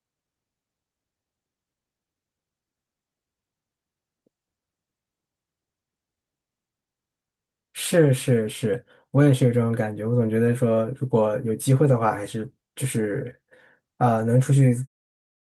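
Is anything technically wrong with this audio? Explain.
No, nothing is technically wrong here: the speech simply ends on a smooth fade out toward the close, as an editor would apply it, without a click or hard edge.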